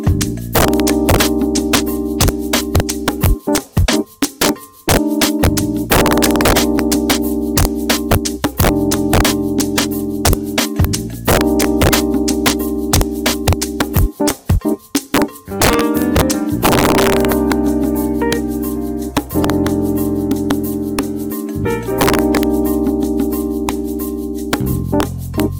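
Integer overflow runs throughout: peaks driven about 4 dB past full scale wrap to the opposite sign on under one percent of samples, giving violent cracks, tall waveform spikes and broadband spectrogram streaks.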